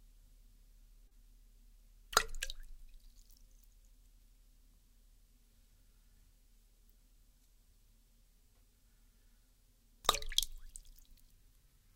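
At about 1.07 to 1.14 s there is short concealed packet loss: roughly 40 ms of audio arrived too late to decode, and the receiver bridged about 32 ms of it by extending the preceding sound before blending back, leaving a brief smeared, wobbling patch.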